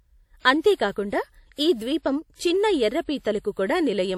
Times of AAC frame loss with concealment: none

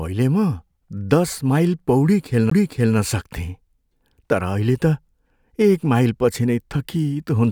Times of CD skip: 2.50

